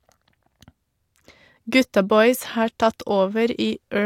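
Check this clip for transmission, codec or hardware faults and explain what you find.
Nothing stood out on listening to this speech recording.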